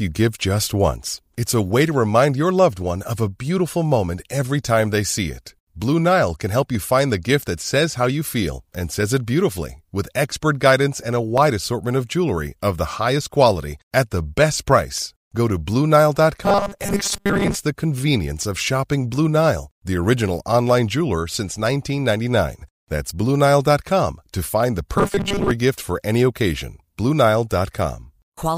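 Dropped samples at 2.82, 6.75, 11.38 and 12.29 s each give a single sharp click, likely where a fraction of a millisecond of samples went missing and the waveform jumped ahead. Robotic sound from repeated short buffers runs from 16.44 to 17.57 s: the speech becomes a rigid, metallic 200 Hz buzz, likely from a 5 ms stretch being replayed while most of the real audio was skipped. More dropped samples click at 18.59 and 24.42 s, and the robotic 200 Hz buzz returns from 24.98 to 25.51 s.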